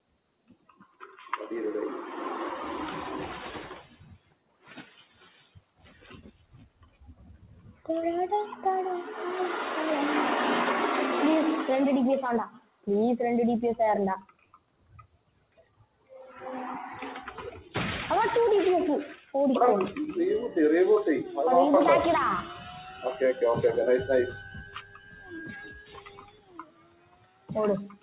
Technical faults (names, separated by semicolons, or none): noise suppressor applied to music or sounds; sound cut by the noise suppressor